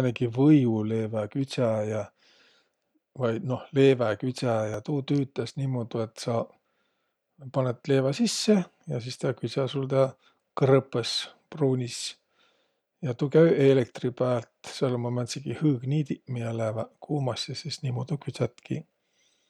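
A speech recording with two brief jumps, at 4.74 s and 8.45 s, where the sound jumps forward by a few milliseconds with no gap of silence between the two sides. Each join is abrupt rather than faded. These are likely a dropped buffer (overrun), where the recording software fell behind and the hardware overwrote a short block of samples before they were collected, so that stretch was lost and the audio on either side was spliced together.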